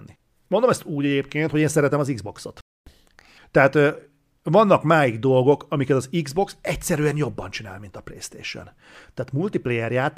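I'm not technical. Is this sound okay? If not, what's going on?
No. At 2.61 s the speech suddenly cuts out and stays silent for about a quarter of a second, until 2.87 s. This is a playback stall: the player most likely ran short of incoming audio and had nothing to play until more arrived.

Right after the gap, from 2.87 s to 3.38 s, the speech rushes along at one and a half times normal speed and sounds squeaky, pitched up by about seven semitones. This is catch-up at higher speed: the player hurries through the delayed audio to make up lost time, then returns to normal.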